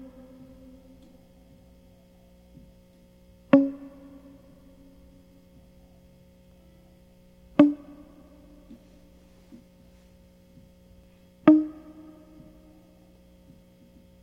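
Dropped buffers (overruns) at 6.52 s and 11.04 s in this music clip: each is a small jump forward, roughly 5 ms lost at the first and about 15 ms at the second, likely because samples weren't collected before the hardware overwrote them.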